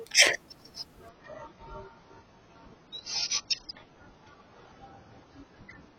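Speech, with an adaptive stream falling to a lower bitrate at 1.09 s: the treble abruptly vanishes above 6.8 kHz and coding artefacts rise without a gap, consistent with a 96 to 16 kbit/s AAC switch.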